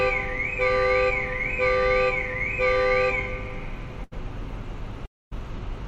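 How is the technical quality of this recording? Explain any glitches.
Two network glitches stand out near the end. At 4.03 to 4.13 s there's a burst of packet loss: about 80 ms never arrived, so the receiver stretched the last bit of sound into a brief fading buzz or hiss, then jumped ahead with that slice missing.

At 5.05 to 5.33 s it's something longer, likely a long network dropout. About 260 ms is gone. The sound smears out briefly and then falls to near-silence for roughly 240 ms before picking up again further along.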